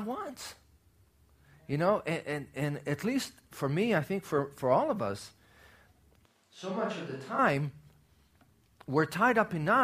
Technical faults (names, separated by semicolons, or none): switch to a distant microphone